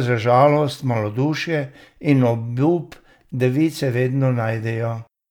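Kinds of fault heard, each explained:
No technical faults are audible in this speech recording.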